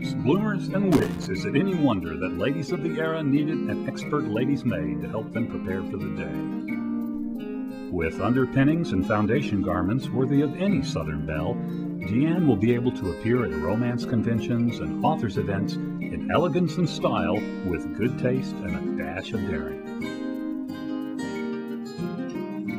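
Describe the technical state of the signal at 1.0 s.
At 1.0 s you're right inside a burst of loose connector crackle running from about 0.92 to 1.27 s. A worn or dirty contact is making and breaking as it shifts, chopping the signal, so you hear a ragged, scratchy crackle over the sound.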